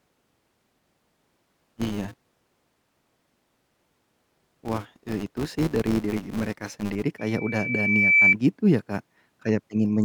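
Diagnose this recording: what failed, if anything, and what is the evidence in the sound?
A filter restarted on every block in the processing chain leaves a 200 Hz buzz tracking the speech level from 0.00 to 7.04 s; each block starts from silence.

Loudspeaker feedback squeal in the acoustic playback path: a 2.3 kHz tone swells over about a second from 7.18 to 8.35 s, peaking about 10 dB above the speech, where loop gain exceeds one.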